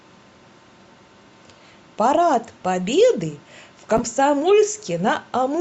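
Chunks out of order at 3.97 to 3.99 s in this speech clip: one 10 ms chunk arrived late and plays after the chunk that should follow it, so two short slices swap places. Nothing goes missing, but the three hard joins produce a brief jumbled moment.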